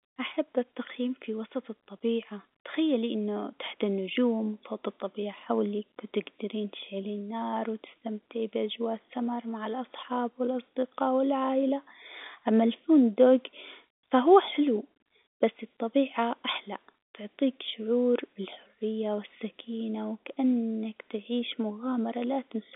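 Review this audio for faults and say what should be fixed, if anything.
Nothing needs fixing: the speech arrives over a G.711 telephone link, band-limited to roughly 200 Hz to 3.6 kHz with only faint quantisation noise tracking the level, which is simply how that line sounds.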